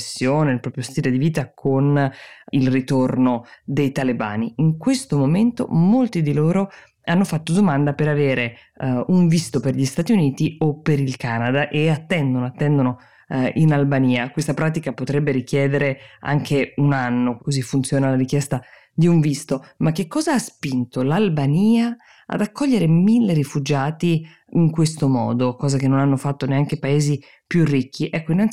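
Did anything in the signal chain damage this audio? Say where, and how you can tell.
No, nothing in the signal chain damaged this audio.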